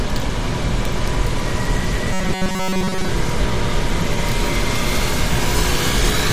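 An everyday-sound recording with robotic sound from repeated short buffers between 2.13 and 3.09 s. A fixed metallic buzz near 188 Hz replaces most of the audio, likely from a roughly 5.3 ms buffer looping. Unlike a dropout, the sound never goes silent; it loops.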